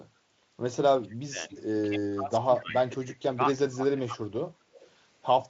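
An echo canceller that likely could not tell the near talker from loudspeaker echo while both sides spoke at once turned the speech down in four stretches: 0.94–1.53 s, 1.83–2.82 s, 2.98–3.41 s and 3.57–4.37 s. The result is speech suppressed in double talk, with the voice dipping by up to about 30, 25, 20 and 20 dB. The same canceller likely failed to remove all of the loudspeaker pickup, giving echo leak at 1.52–1.59 s and 4.74–4.90 s: a faint copy of the speech, delayed by 206 ms and about 20 and then 30 dB below it. The Speex codec carrying the call leaves little or no audible damage.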